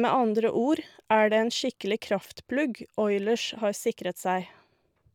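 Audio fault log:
0.11–5.13 s, clock slip clicks: faint, evenly spaced ticks about every 30 ms run under the speech, merging into a soft rattle, some two hundred in all. Each is a single sample dropped or repeated, likely because two devices run on unlocked clocks differing by roughly a thousand ppm. A waveform shows tiny one-sample steps at regular intervals, and a spectrogram shows thin, evenly spaced vertical lines that are brightest where the speech is loud.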